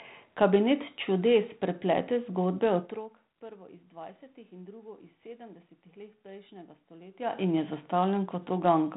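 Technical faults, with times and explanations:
The speech carries the narrow, telephone-band character of ADPCM coding at a rate that fits 32 kbit/s G.726 as used on DECT cordless links, with nothing above 4 kHz, a bed of room noise beneath it, and level changes around 3 s and 7 s where the talker moves relative to the microphone.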